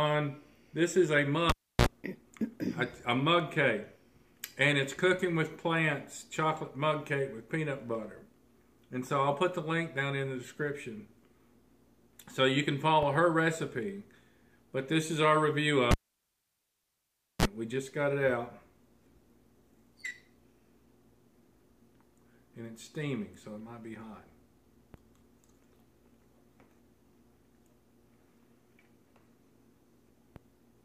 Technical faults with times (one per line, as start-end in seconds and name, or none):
1.50-1.87 cable pulled and plugged in
15.91-17.45 cable pulled and plugged in